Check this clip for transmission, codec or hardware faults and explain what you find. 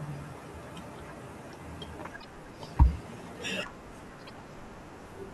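Two repeated frames faults are present in this speech, at 2.20 to 2.25 s and 4.26 to 4.31 s. Each time a 24 ms block, which points to a single compressed frame, plays twice, producing a brief stutter and lengthening the audio by 24 ms.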